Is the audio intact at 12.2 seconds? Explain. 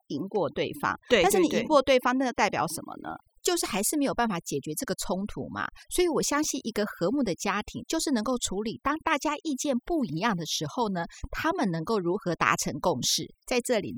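No, not really. At 12.2 seconds you're still hearing the overdone noise removal that runs through the whole recording. The noise reduction was pushed too hard, so any frequency band sitting close to its idea of the noise gets clamped down or cut out, and the softer parts of the voice get dragged along with it. What's left there is a lowered background that breaks up into little twinkly, warbling specks.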